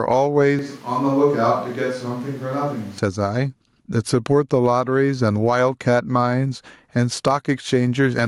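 Gain pumping runs through the whole clip, from the start to the end. The level keeps breathing, with the gain swinging by around 10 dB. The likely cause is input gain set far too high, with a fast limiter or compressor clamping down on every peak, so loud and quiet passages sit squashed close together.

A switch to a distant microphone occurs from 0.59 s to 2.98 s. The sound abruptly turns hollow and roomy, loses its low end, and falls by roughly 10 dB, while the background noise comes up to around 30 dB below the speech. The change in and back out is instant rather than a fade. This points to the close microphone's signal dropping out and the recording falling back, likely, to a pickup further away, such as a camera microphone.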